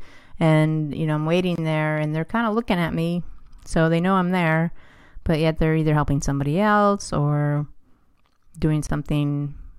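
It's a speech clip with two short dropouts, each a gap at a join of encoded pieces. The first sits from 1.56 to 1.58 s, right after "you know I'm" and before "there and they're kind"; the second runs from 8.87 to 8.90 s. Both are gaps of about 26 ms, their edges smeared by the codec. That's what you get when separately encoded chunks are butted together untrimmed, so the encoder's start-up delay and end-frame padding stay in as a hole before the speech picks up again.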